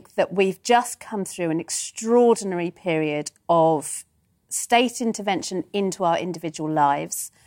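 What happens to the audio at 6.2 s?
Nothing goes wrong at 6.2 s; the speech carries on intact through that moment, with no dropout, click or distortion.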